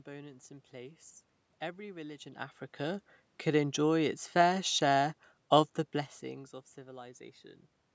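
Nothing's gone wrong with the system here; the speech just dips and swells in level around two seconds and again near six as the talker shifts relative to the microphone, with the room's own background noise and the call processing's usual bass trim and 8 kHz top along for the ride.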